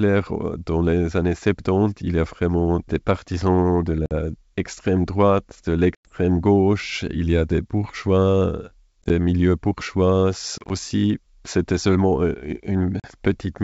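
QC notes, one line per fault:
4.06 s, packet loss on an ADPCM call: a hard 50 ms silence after "vraiment des partisans de", consistent with roughly five lost packets; the decoder's predictor and step size lose sync, so "extrême droite de" resumes slightly distorted.
5.95–6.09 s, packet loss on an ADPCM call: a 100 ms gap after "extrême droite de", likely around ten packets; the desynchronised decoder state gives distortion settling within tens of milliseconds as "gauche il y a" begins.
9.02–9.11 s, packet loss on an ADPCM call: 40 ms lost as short dropouts scattered over 80 ms, longest 20 ms; each restart leaves the adaptive step size wrong, giving a rough, choppy stretch.
10.58–10.72 s, packet loss on an ADPCM call: 70 ms missing across 120 ms after "milieux bourgeois", longest hole 30 ms; repeated predictor mismatches produce distortion until the decoder reconverges.
13.00 s, packet loss on an ADPCM call: a single 40 ms hole near the end, consistent with about four packets, followed by brief distortion as the decoder's step size recovers.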